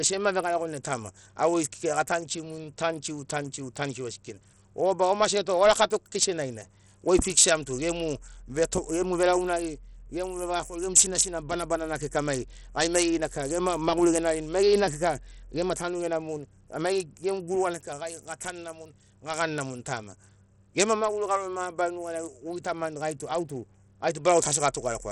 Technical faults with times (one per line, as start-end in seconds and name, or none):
0.00-25.12 Bluetooth SBC compression